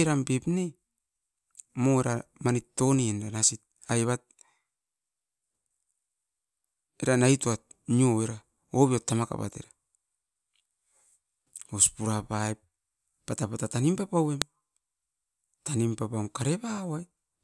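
At 14.42 s, just after "ppata pata tanim papauem", a file header played as audio gives a sharp, loud click. Header bytes from a joined piece were read as sound samples.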